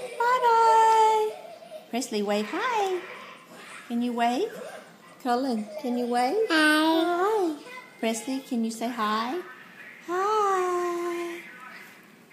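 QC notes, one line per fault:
No faults found on this pass; nothing to log.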